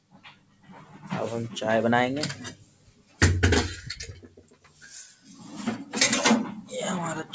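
A speech-tuned noise suppressor is left running on non-speech audio, which came through a call path with nothing above 8 kHz, consistent with 64 kbps G.722. It treats sustained material and tails as noise, so levels pump by around 15 dB while attacks survive and held parts sag. The worst of it is the sound cut by the noise suppressor at 0.00–1.05 s (down about 14 dB), 2.53–3.21 s (about 13 dB), 4.14–4.83 s (about 14 dB) and 5.15–5.43 s (about 8 dB), where steady or decaying sound gets pulled under and its fade chopped short.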